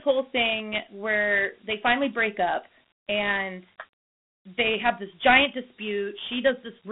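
Dialogic VOX ADPCM throughout: coarse 4-bit steps, fitting a 32 kbps rate, leave plainly audible gritty hiss trailing the speech, with a 150 Hz to 3.5 kHz band and nothing above 3.8 kHz.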